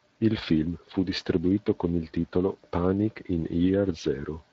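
From start to finish the speech carries plainly audible Speex codec damage, a hoarse, grainy roughness at a level that points to roughly 20 kbps. This CELP coder rebuilds each frame from a vocal-tract filter driven by a coded excitation, and too few bits for that excitation leave noise where clean pitch pulses belong. On a spectrogram the voiced harmonics look blurred and broken, with a noisy haze filling the gaps between them.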